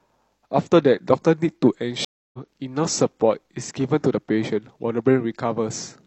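A stream reconnect breaks this speech clip at 2.05 s. About 286 ms of silence follows, then the decoder restarts and the audio resumes roughly 0.2 s further on.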